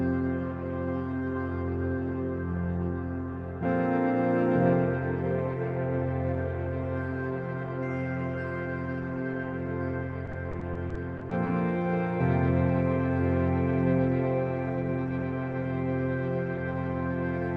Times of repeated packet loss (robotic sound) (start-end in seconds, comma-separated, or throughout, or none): 10.25-11.48